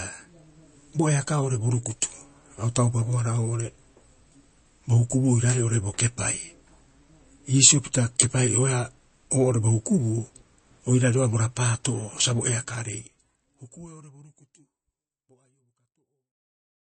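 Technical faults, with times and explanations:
Throughout, MP3 compression: nothing above 8.3 kHz and a watery swirl on sibilants, likely from a low bitrate near 32 kbps; spectrograms show a flat ceiling with flickering patches below it.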